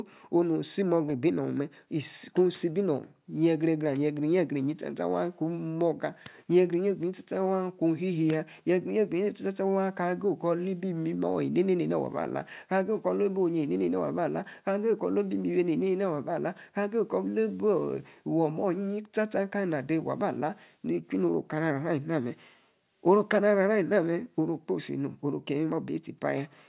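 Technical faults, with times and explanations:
No technical faults can be heard in this speech.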